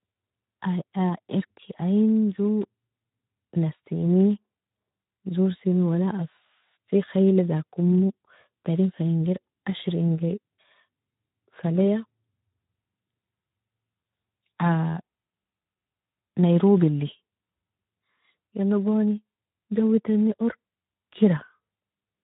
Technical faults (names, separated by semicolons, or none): Speex codec